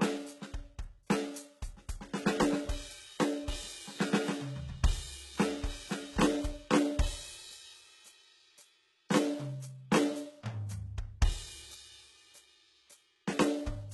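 Heavy HE-AAC compression artefacts run through the whole music clip, likely from a very low bitrate around 16 kbps. The treble is copied up from lower bands by spectral band replication, so its harmonics don't line up, leaving the treble gritty and metallic, with nothing above 11.8 kHz.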